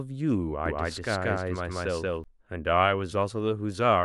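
A doubled audio track runs from 0.66 to 2.24 s in this speech: a full-band copy about 200 ms behind, equally loud and dry, starts and stops abruptly, likely from a second capture path.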